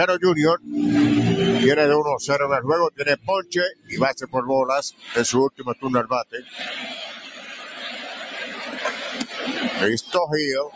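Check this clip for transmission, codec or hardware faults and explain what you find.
Yes, a speech noise suppressor was left running on this audio, and it causes two related faults. The call microphone path, which tops out at 8 kHz, is working as expected.

Noise suppressor applied to music or sounds, throughout the clip: a suppressor tuned for speech treats steady tones, ambience and reverb tails as noise and turns them down, while onsets get through. Level swings by roughly 10 dB, so the sound pumps and thins between attacks.

Sound cut by the noise suppressor, at 3.17–3.52, 3.71–3.95, 4.92–5.10, 5.51–5.84, 6.24–6.56 and 7.16–7.80 s: in these stretches the suppressor judged sustained or decaying material to be noise and attenuated it harder. The first five drop by about 14 to 17 dB, and the last by about 7 dB. Held sound sinks and tails are cut short.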